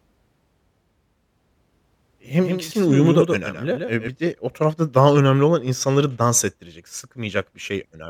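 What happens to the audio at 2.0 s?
At 2.0 s the speech is doubled: a second copy of the same audio trails the original by roughly 150 ms, only a few decibels quieter. This doubled audio track is already present when the clip begins and cuts off abruptly at 4.08 s. It is likely caused by the signal being picked up a second time through a slower path. Unlike echo or room reverberation, the copy is a single, full-band repeat with no decay tail or room colouring.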